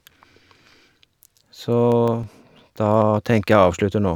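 A scratch on the disc carrying this speech recording destroyed more data than error correction could rebuild once per revolution, so the player had to interpolate or mute short runs of samples. That produces CD scratch ticks: eight regular ticks between 1.92 and 3.02 s, about seven a second, each a tiny click or dropout lasting a few milliseconds at most, of uneven strength.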